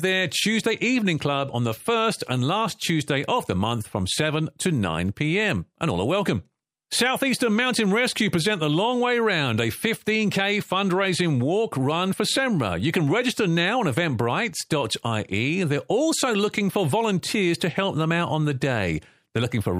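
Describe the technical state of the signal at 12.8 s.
At 12.8 s the signal is intact, with no audible fault at that point in the speech.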